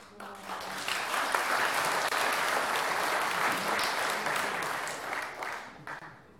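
At 2.09 s the sound drops out for about 28 ms, then again at 5.99 s for about 25 ms. These are gaps at joins of encoded pieces. Each piece was encoded separately and glued together untrimmed, leaving encoder delay and end padding. You hear brief holes with smeared edges before the sound resumes where it left off.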